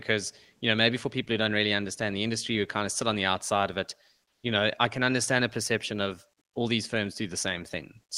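Likely discontinuous transmission cut the sender between "the outside of it" and "you know I can", so from 4.29 to 4.43 s comfort noise in place of the background fills in: flat, featureless, about 10 dB off the background's level.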